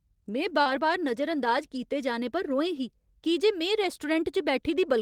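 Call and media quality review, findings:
Short concealed packet loss, 0.61–0.68 s, just before "बार नजर अंदाज": about 40 ms of audio missed the decoder's deadline; receiver-side concealment extended the preceding sound to fill the hole, then cross-faded back. Heard as a brief smeared wobble at the onset.

Lost packet rebuilt from error correction, 0.66–0.80 s, running into "बार नजर अंदाज": separate losses, about 80 ms, fitting four 20 ms packets, recovered from Opus in-band FEC copies. No gap, but the rebuilt stretch sounds rougher and noisier than the surrounding audio.

Lost packet rebuilt from error correction, 1.76–1.78 s, between "बार नजर अंदाज" and "जाने पर": single loss, about 20 ms, fitting one packet, decoded from the low-bitrate redundant copy. A short grainy patch with no dropout.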